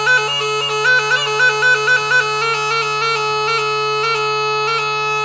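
A wrong sample rate runs through the whole clip: the samples are being clocked out more slowly than they were captured, with no rate conversion in between. The result fits material recorded at 22 kHz but played at 16 kHz. Everything runs at 0.726 times its proper speed, and pitch falls with it by about 5.55 semitones, so the audio sounds dragged out, low and heavy from start to finish.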